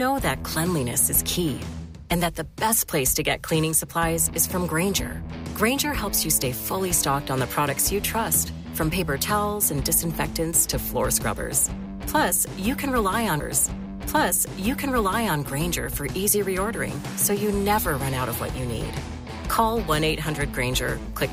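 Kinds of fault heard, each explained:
Stream segment repeated: a two-second stretch of the sound plays a second time from 13.39 s to 15.39 s, as though the player queued the same chunk twice, with a small blip at the jump back. On a spectrogram or waveform, the pattern immediately before reappears identically, adding 2 s.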